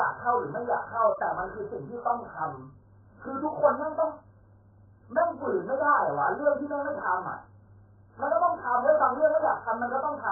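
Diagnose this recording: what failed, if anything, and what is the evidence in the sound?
Codec stage: the speech is dull and heavily smeared throughout, with nothing above 1.7 kHz. The likely cause is AAC compression, and the sound fits a bitrate around 8 kbps.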